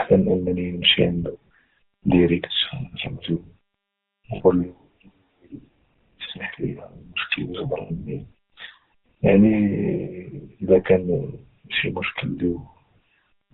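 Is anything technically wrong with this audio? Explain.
Yes. GSM full-rate codec damage is plainly audible throughout. It models the vocal tract from pulses and drops everything above 4 kHz, so the speech sounds buzzy and gravelly. Lost GSM frames occur at 4.36 to 4.41 s and 7.82 to 8.06 s. Missing audio, 40 ms and 80 ms long, was patched by repeating the last good frame, giving a brief rough, metallic ring.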